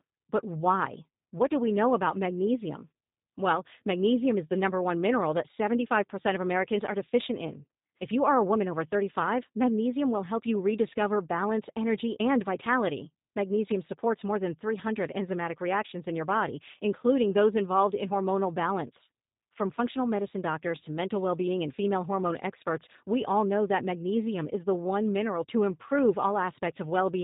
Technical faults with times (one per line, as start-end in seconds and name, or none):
0.00-27.23 G.729 codec